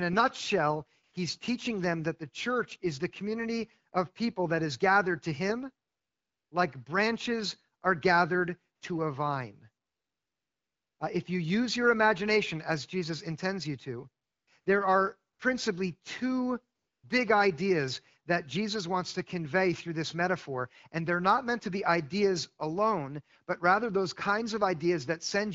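AMR comfort noise fills pauses at 1.03–1.13, 5.87–6.51, 8.75–8.81, 9.85–10.99, 14.23–14.47, 14.61–14.65, 15.33–15.39 and 16.77–17.03 s. Speech frames stop and synthetic noise replaces the real background. It sounds smooth and steady, switching abruptly. On a spectrogram it shows as flat, featureless noise blocks with hard edges.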